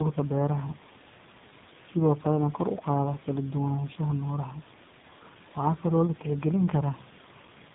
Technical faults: tandem speech coding

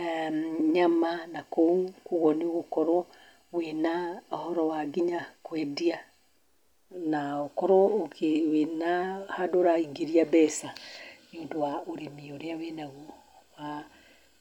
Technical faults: none

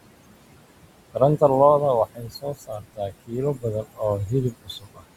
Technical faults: noise suppressor artifacts; speech cut by the noise suppressor

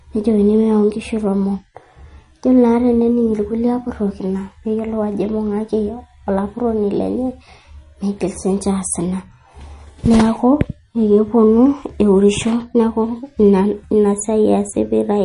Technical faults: MP3 compression

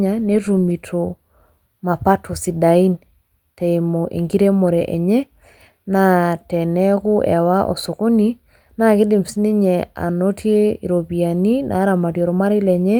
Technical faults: none

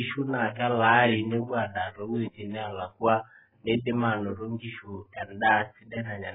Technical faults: AAC compression

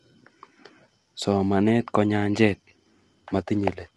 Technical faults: low-delay AAC compression

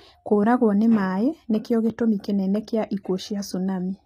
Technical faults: HE-AAC compression

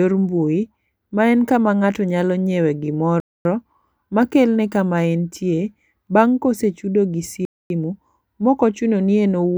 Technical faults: gap between chunks

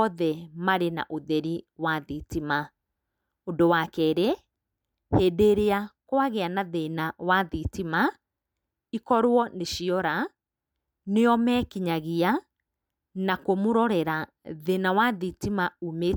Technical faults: none

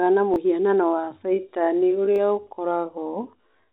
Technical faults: repeated buffer; time-stretched section

